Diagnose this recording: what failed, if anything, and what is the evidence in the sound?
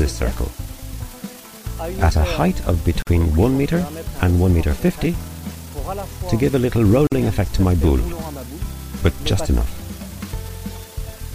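Low bit depth with dither, at the sample-format conversion: a constant, even hiss sits under the sound from start to finish, about 20 dB below it, with no distortion, which fits a 7-bit word length. Dither turned the rounding error into white noise, which a spectrogram shows as a flat, uniform floor across all frequencies.

Gap at a join of encoded pieces, at the codec stage: the sound drops out from 3.02 to 3.07 s (46 ms) and from 7.07 to 7.12 s (49 ms), four seconds apart, then carries on where it stopped. Separately encoded pieces were joined without trimming each run's start delay and end padding. The waveform shows short flat stretches with slightly smeared edges, and the spectrogram shows narrow vertical blank bands.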